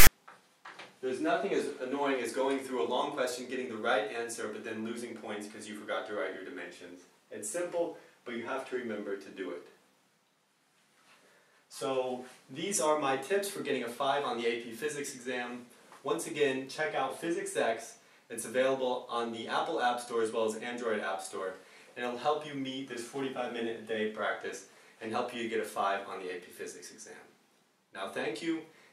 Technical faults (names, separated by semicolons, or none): file tags played as audio